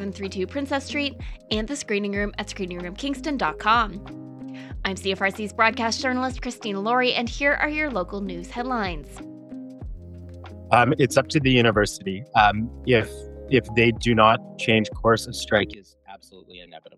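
One stereo channel was likely inverted in polarity from 15.74 s to the end at 16.97 s, so summing to mono cancels the shared content and drops the sound by about 24 dB.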